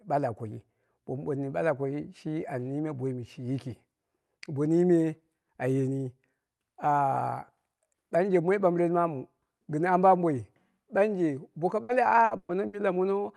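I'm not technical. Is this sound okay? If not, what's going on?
No. Repeated packet loss (robotic sound) hits from 11.83 to 12.76 s. Bits of the call audio went missing four times, the longest about 120 ms. Each hole was covered by stretching the previous sound, so about a third of that stretch sounds choppy and robotic.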